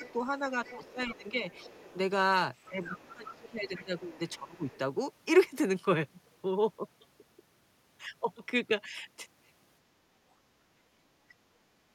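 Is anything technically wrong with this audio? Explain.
Yes. The speech shows three echo-canceller faults.

Speech suppressed in double talk occurs from 0.0 to 1.79 s, from 2.67 to 4.69 s and from 9.9 to 10.03 s. The talker's level sinks while another voice is present. The deepest dips reach roughly 15 dB in the first stretch and roughly 20 dB in the later two. Together they cover around a second, then a second and a half, then a brief moment. The likely cause is an echo canceller that could not tell the talker from the loudspeaker echo, so it pulled both down.

The other side's voice leaking through is heard at 0.03 to 0.12 s, 0.65 to 1.97 s, 2.56 to 4.78 s and 11.29 to 11.34 s. A second voice sits faintly under the talker. It is roughly 20 dB down in the first two spots and roughly 15 dB down in the third, where it is most noticeable. The last trace is a tiny scrap, far quieter. This is most likely loudspeaker sound that the canceller failed to remove from the microphone.

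Background gated by the echo canceller happens from 10.46 to 10.67 s. The room tone drops by about 6 dB for a short moment, around 150 ms in total, and then recovers. It sounds like the background briefly ducking. The canceller clamped the microphone while the loudspeaker was active and released it a moment later.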